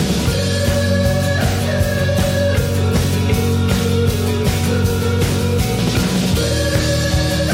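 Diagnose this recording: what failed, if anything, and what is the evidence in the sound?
Nothing failed, and the sound gives no evidence of a fault at any stage.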